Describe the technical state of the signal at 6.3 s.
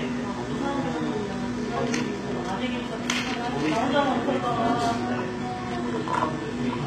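At 6.3 s the signal carries HE-AAC compression, present throughout the clip. The treble sounds gritty and metallic, with upper harmonics that fail to line up with the lower band. This is likely spectral band replication rebuilding the top from copied lower bands, which fits a bitrate around 20 kbps.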